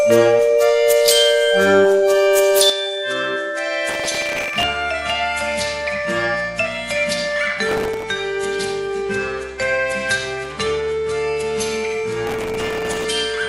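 From 2.70 s to the end, the sound abruptly turns duller and quieter, losing everything above 11.4 kHz and dropping roughly 10 dB, with a faint new noise floor underneath and no gap at the change. This points to an input switched to a poorer device, likely another microphone. Gritty crackle then tears across the audio from 3.89 to 4.63 s, 7.69 to 8.03 s and 12.27 to 13.05 s. This is processor overload crackle: dozens of very short buffers, around a millisecond and a half each, missed their deadlines and were filled with stale audio, leaving hard-edged fragments.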